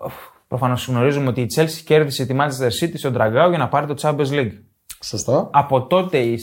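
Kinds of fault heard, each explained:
No technical fault is audible in the speech, and the signal stays continuous and steady throughout.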